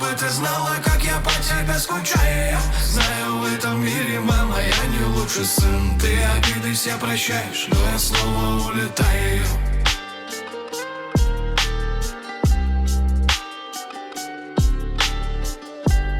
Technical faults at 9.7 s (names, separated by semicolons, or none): none